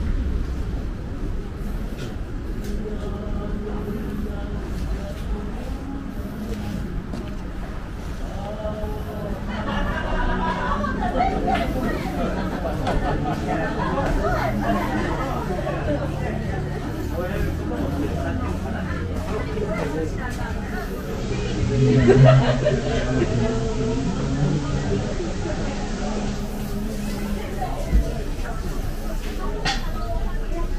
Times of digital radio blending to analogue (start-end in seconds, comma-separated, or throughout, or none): 20.93-26.65